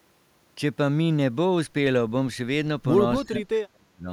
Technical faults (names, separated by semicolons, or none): speech suppressed in double talk